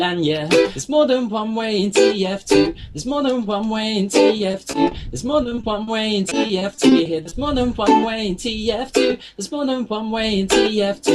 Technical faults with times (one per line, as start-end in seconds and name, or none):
4.37-4.93 repeated packet loss (robotic sound)
5.43-5.89 repeated packet loss (robotic sound)
6.29-7.33 repeated packet loss (robotic sound)